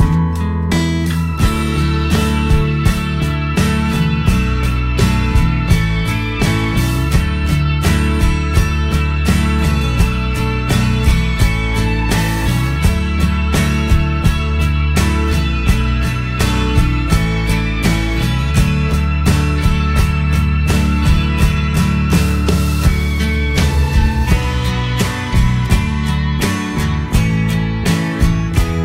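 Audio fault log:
No technical faults can be heard anywhere in the audio.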